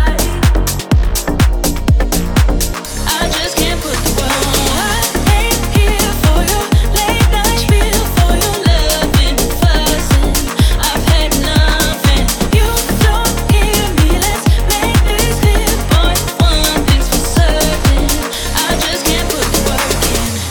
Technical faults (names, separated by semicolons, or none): none